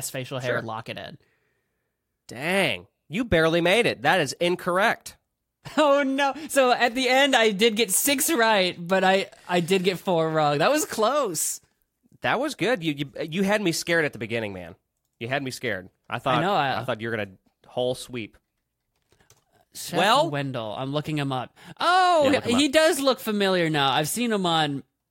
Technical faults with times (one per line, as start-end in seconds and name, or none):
none